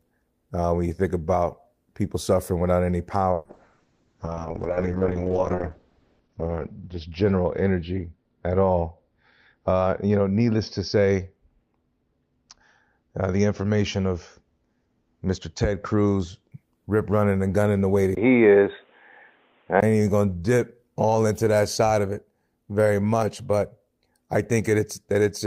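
From 3.37 s to 16.57 s the speech goes through a call bitrate drop. The encoder's budget falls from 32 kbps to 6 kbps and the audio band shrinks from 20 kHz to 6 kHz, bottoming out for about 3.1 s. The speech turns rough and watery as well as duller. Those swirling coding artefacts separate it from a device change, which alters tone cleanly.

Between 18.15 s and 19.82 s the sound abruptly becomes boxy and thin. Nothing passes above 3.8 kHz, a 20 ms silence marks the cut, the level shifts by a few decibels, and a new noise floor appears some 45 dB below the speech. The likely cause is the input switched to a poorer device. Unlike a bitrate drop, the change is instant and the band is hard-limited without coding artefacts, and a different background noise arrives with it.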